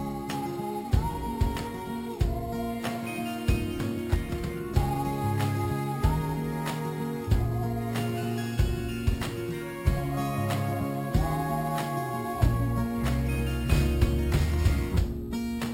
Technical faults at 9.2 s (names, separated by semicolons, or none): imaging from sample-and-hold upsampling